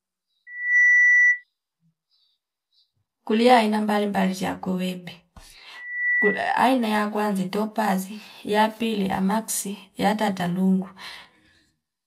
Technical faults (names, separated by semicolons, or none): loudspeaker feedback squeal